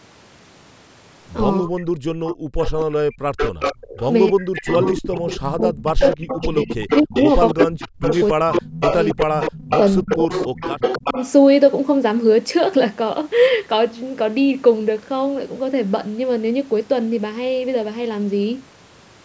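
From 1.61 to 1.89 s the speech dips sharply, by about 40 dB at worst, for roughly a third of a second. This is speech suppressed in double talk. Both ends were likely talking at once, and the echo canceller pulled everything down.

From 2.17 to 3.89 s the background is gated by the echo canceller. The room sound drops out in bursts, about 40 dB deep, for roughly 0.7 s in total. The canceller clamps the microphone while the far end plays.

An echo leak starts at 2.27 s and runs to 4.04 s. A copy of the speech returns 280 ms late, only slightly quieter than the original. The far side's canceller likely failed to remove its loudspeaker pickup.

At 4.31 to 4.68 s the speech is suppressed again for about a third of a second. The likely cause is the same double talk.

The echo leak returns from 4.65 to 11.32 s, again 280 ms behind and nearly as loud as the speech. This is likely the same leak through the far side's loudspeaker.

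Overlapping it, from 5.5 to 11.18 s, double-talk suppression keeps cutting the speech. It dips as far as about 40 dB, for roughly three seconds in all. The likely cause is the canceller ducking both talkers as they overlap.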